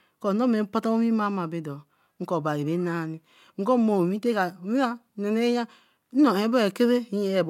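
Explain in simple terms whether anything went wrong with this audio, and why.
Nothing went wrong here: the speech comes across steadily the whole way, with no glitches or breaks to point to.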